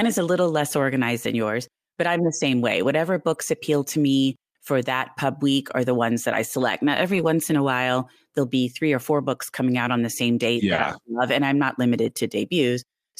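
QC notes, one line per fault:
1.23–1.25, 2.51–2.53 (right after "yours but I'm the"), 3.33–3.39, 7.07–7.25 (just before "in a while there'll"), 10.77–10.79 (after "on the same date") and 12.05–12.11 s: lost packet rebuilt from error correction. Each time a chunk of the stream went missing, but the next packet carried a low-bitrate backup copy, so there's no dropout. Instead you get a rougher, noisier patch. Most are 20–40 ms, fitting 20 ms frames, but the one around 7.1 s runs about 100 ms.
10.75–10.79 s: short concealed packet loss. The first 20 ms here had no backup to fall back on, so the decoder guessed. It stretched the last bit of sound forward, carrying the pitch if it was voiced and shaped noise if not, then crossfaded into the real audio. That comes across as a brief smear or wobble, and it runs straight into the rebuilt frame right after "on the same date".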